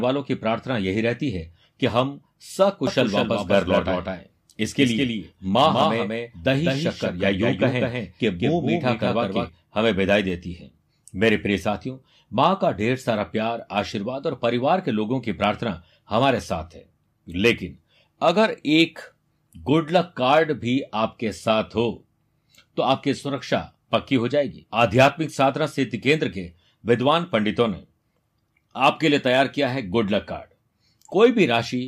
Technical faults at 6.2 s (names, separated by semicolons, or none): doubled audio track